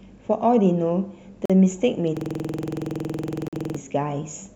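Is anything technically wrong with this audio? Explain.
Yes, there are two problems in this speech clip.

First, a gap between stream segments: hard-edged silent holes at 1.46 to 1.50 s (about 42 ms) and 3.48 to 3.53 s (about 46 ms). Segment timestamps didn't quite meet, so the player padded the gap with silence. Nothing is lost; the speech just briefly drops out.

Second, a system hang loop from 2.17 to 3.76 s. The system froze while the audio hardware kept replaying one 46 ms chunk, which fits a 2048-sample buffer, about 33 times. At 21.5 Hz you hear a rapid, rattling stutter.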